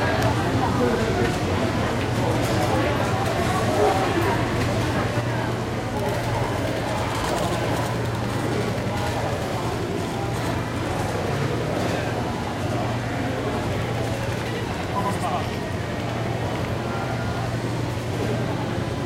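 One channel runs late by about 93 ms, which fits a 4096-sample buffer, and summing to mono gives channel delay (doubling). From 5.21 s onward, this everyday sound recording carries an equal-level slap echo.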